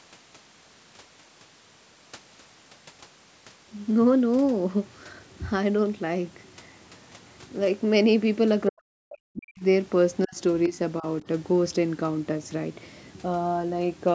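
Speech that ducks hard from 8.68 to 9.63 s, falling by around 40 dB at its deepest, then dips again at 10.25, 10.68 and 11.0 s. That's likely speech suppressed in double talk, with the echo canceller pulling the talker down while the far end spoke.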